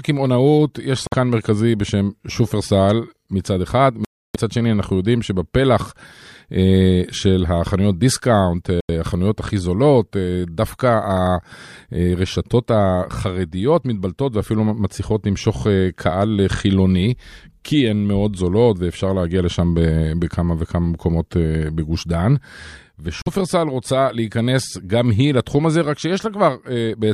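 A speech recording interrupted four times by clean gaps of silence: about 51 ms at 1.07 s, 300 ms at 4.05 s, 86 ms at 8.81 s and 45 ms at 23.22 s. These sound like a Bluetooth stall, likely caused by radio interference delaying packets until the headphones' buffer emptied and playback paused for the resends. Unlike a codec dropout, which leaves warbling or smeared sound, each break is true silence with a hard edge before the speech carries on.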